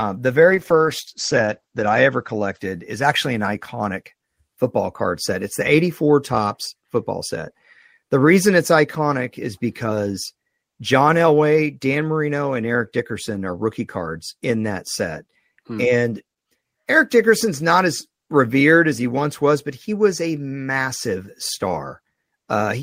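From 0.51 to 2.65 s, just before "is actually an iconic", a call bitrate drop makes the speech coarse and muffled, with top end cut off near 8 kHz for about 1.5 s. This fits the encoder falling from around 32 kbps to 11 kbps before recovering.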